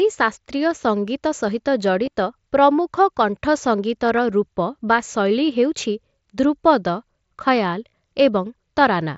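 At 2.05 to 2.17 s, concealed Bluetooth headset packet loss scatters short gaps of 7.5 ms or less over about 120 ms of speech. The phone patches each by repeating a matching slice of the preceding waveform, so the damage is a faint roughness. At 7.89 to 7.93 s, the loss is one continuous 45 ms gap. It fills with a steady buzzy tone at full level, then warbles as real audio resumes over the mSBC wideband link.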